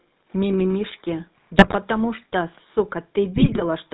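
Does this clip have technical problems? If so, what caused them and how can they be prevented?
Yes. The whole clip carries GSM full-rate codec damage: a buzzy, gravelly roughness with nothing above 4 kHz, which fits the 13 kbps GSM full-rate coder. It comes from modelling the vocal tract and driving it with a sparse, regularly spaced pulse excitation. Unlike plain band-limiting, the roughness itself is the giveaway. Carrying the audio over a wideband codec such as AMR-WB or Opus prevents it.

GSM bit errors break in from 1.56 to 1.75 s and from 3.36 to 3.63 s as squawks, pops and gargling. Corrupted filter, pitch and gain values warp the spectrum and spike the level frame by frame. Packet-loss concealment would smooth over gaps instead of producing these sudden harsh bursts. A stronger radio link with better error protection prevents them.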